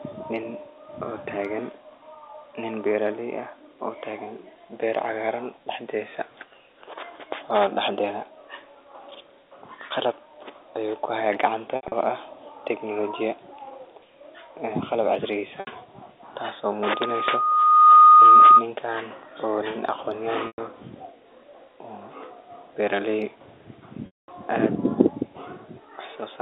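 Speech over a G.711 A-law telephone line, band-limited to roughly 300 Hz to 3.7 kHz, breaks up four times from packet loss with pitch repetition: at 11.76 to 11.92 s, 15.60 to 15.67 s, 20.47 to 20.58 s and 24.06 to 24.28 s. The receiver bridges missing packets by looping the last pitch period. The shorter gaps (70 ms at 15.6 s, 110 ms at 20.47 s, and 120 ms scattered over 160 ms at 11.76 s) come across as a briefly held, buzzy tone. The 220 ms gap at 24.06 s fades toward silence before speech cross-fades back in. On a spectrogram each gap shows frozen, evenly spaced horizontal harmonics. In the waveform it is an identical repeating cycle that tapers off. The 10 ms granularity of the losses fits 10 ms packets. From 16.82 to 18.66 s a loudspeaker feedback squeal appears: the microphone picks up its own loudspeaker, and at 1.2 kHz the loop gain exceeds one. That tone swells over about a second to somewhat louder than the speech. 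It shows as a single bright horizontal line at 1.2 kHz on a spectrogram and as a growing sinusoidal envelope in the waveform.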